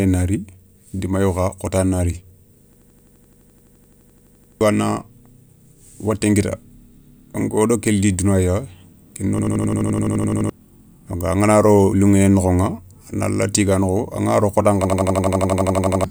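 Three times the driver stalls while the hardware keeps replaying one 85 ms buffer, fitting a 4096-sample ring: a system hang loop. Speech becomes an 11.7 Hz machine-gun stutter at 2.73–4.61 s, 9.39–10.50 s and 14.85–16.04 s, losing roughly two seconds, then one, then one.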